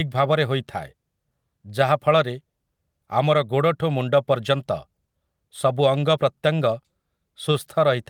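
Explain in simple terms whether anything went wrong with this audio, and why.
Nothing went wrong on the technical side here: the speech signal comes through steady and unbroken, with no interruptions, distortion or sudden changes anywhere in the recording.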